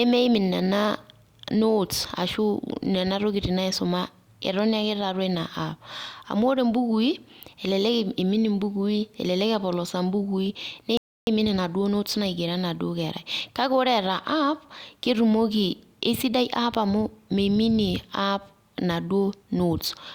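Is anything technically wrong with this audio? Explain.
Yes. At 10.97 s the speech stops dead in a rebuffering stall. There is silence until 11.27 s, then it picks up exactly where it left off. No audio is skipped. The player ran short of downloaded data and had to wait for more to arrive before continuing. The pause adds about 0.3 s to the timeline. It sounds like an unnatural hitch, an abrupt hole in mid-flow rather than a pause anyone would make.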